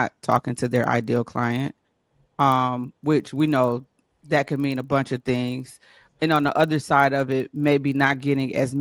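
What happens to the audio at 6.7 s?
At 6.7 s, as across the whole clip, a resampler restarted on every block (24 kHz to 48 kHz) leaves edge errors every 40 ms, giving a 25 Hz buzz: evenly spaced vertical spectrogram streaks and waveform glitches.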